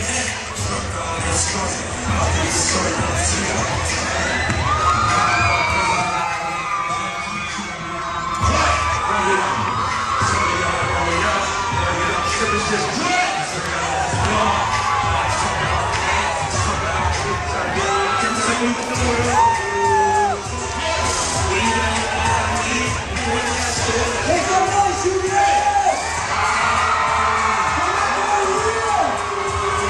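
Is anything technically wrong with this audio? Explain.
Yes. From 6.01 to 8.42 s the sound turns hollow and phasey. This is channel delay (comb filtering): one channel lags about 5 ms, so the mono sum cancels frequencies at even intervals, starting near 100 Hz.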